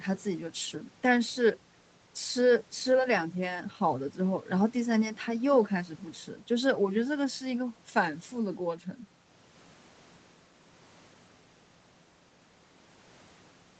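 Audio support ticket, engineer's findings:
No faults found in the speech signal: content stops near 8 kHz, consistent with the call's microphone processing and Opus at around 20 kbps on the WebRTC path, with no dropouts, distortion or level problems.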